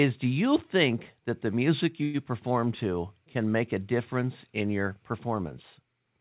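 At 2.03 s, between "think that the music" and "perform to can make", a call audio freeze stretches the last sound into a brief fading buzz for about 0.14 s. Likely the jitter buffer ran dry while packets stalled. The 108 ms of filler delays everything after it, and nothing's lost. The band stops at 4 kHz, which fits a G.711 mu-law call path.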